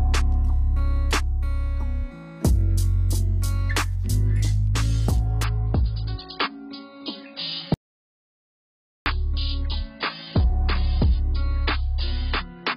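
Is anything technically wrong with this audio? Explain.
Yes, there are two faults. From 5.44 s to the end, the adaptive stream drops to a lower bitrate. Treble vanishes above 5.1 kHz and artefacts rise, which fits a fall from about 96 to 16 kbit/s. From 7.74 to 9.06 s comes an audio dropout to silence. For 1.32 s there is silence with no room tone, likely from a lost input.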